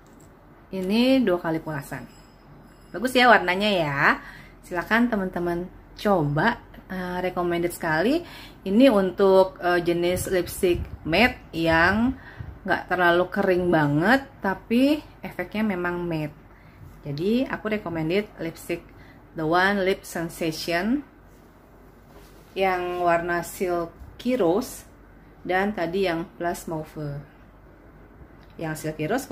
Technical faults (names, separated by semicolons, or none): none